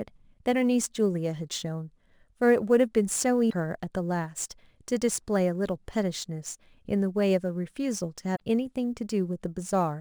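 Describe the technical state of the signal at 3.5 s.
At 3.5 s the speech passes through damaged data in a compressed stream. The fault runs from 3.46 to 3.53 s, about 70 ms. Part of the coded stream there is wrong, so the decoder cannot read those frames properly. It loses sync and hunts for the next valid frame header. The result is a short chirp or squawk in place of the sound.

Sample clock jitter is also present at this moment, as it is across the whole clip. The converter's clock wanders by a few microseconds, so each sample is taken slightly early or late. The timing error matters most where the waveform changes fastest. It leaves a hiss or roughness sitting roughly 30 dB below the signal. That roughness grows on loud, bright parts of the speech and disappears in silence.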